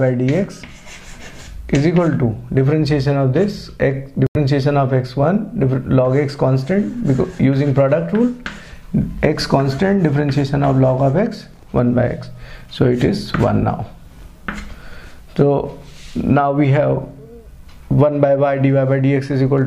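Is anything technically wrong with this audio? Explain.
Yes. There is one fault, a Bluetooth dropout. At 4.27 s the sound cuts to silence, and it returns at 4.36 s. The edges of the gap are abrupt or fade over a few milliseconds. When the sound comes back, it has moved on, as if it had kept playing unheard. About 85 ms of material is missing, which fits a few lost packets. The likely cause is packets failing to reach the headphones in time and being discarded.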